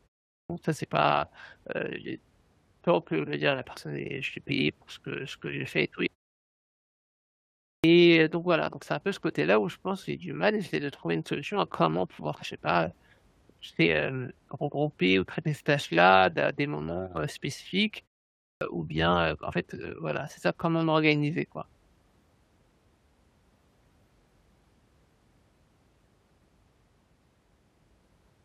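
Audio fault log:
0.39 s, 7.72 s, 18.49 s: clipped start after a pause. The sleeping output loses 106 to 121 ms of onset, so waveforms jump abruptly from flat silence.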